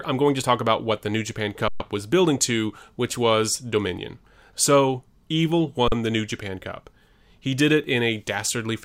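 Underrun with held sample at 1.68 s and again at 5.88 s: the output buffer ran dry, and instead of dropping to silence the converter kept putting out its last sample value, so the speech flattens into a frozen, steady level for 120 ms and then 40 ms. Onset is nearly click-free, and since the speech carries on from where it paused rather than skipping ahead, each gap ends with only a soft step.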